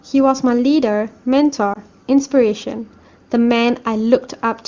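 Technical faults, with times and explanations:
1.74 to 1.79 s, lost AMR speech frame: one 20 ms frame was replaced by repeating the last pitch and vocal tract settings at lower gain, causing a brief warbling dip.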